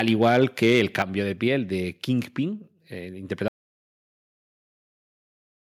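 From 0.08 to 1.02 s the speech shows microphone overload: peaks run about 3 dB past the converter's limit and roughly one or two percent of samples are flattened, giving a crackling edge that tracks the loudest syllables rather than a steady hiss. At 1.02 s the microphone volume steps down by about 5 dB in a single jump, likely the call software reacting to that clipping; voice and background fall together, unlike a speaker simply moving away. From 3.48 s to the end there is an audio dropout to silence, likely from lost input, and the gap is silent with no room tone, which distinguishes it from a pause.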